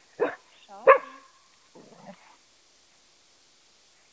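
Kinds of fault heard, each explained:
No kinds of fault are heard in this clip.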